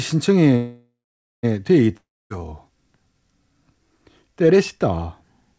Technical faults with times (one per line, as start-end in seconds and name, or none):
0.56-1.45 call audio freeze
1.97-2.40 long network dropout